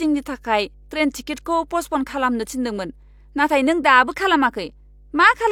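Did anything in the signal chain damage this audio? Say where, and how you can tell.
Yes. A steady low drone at 50 Hz runs under the speech from start to finish, sitting roughly 30 dB below it, constant through pauses as well as talking. That is mains hum, and it points to the analogue wiring stage: a ground loop between connected equipment, or a transformer close to an unshielded cable, has let the 50 Hz power line couple into the signal before conversion, so the tone is recorded along with the speech.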